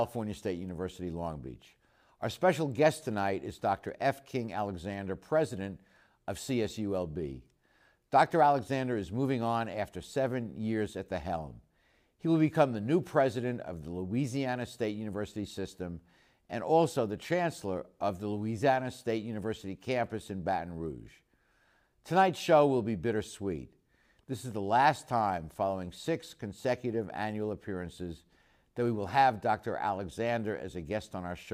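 Nothing in the speech recording stood out as a technical problem on listening.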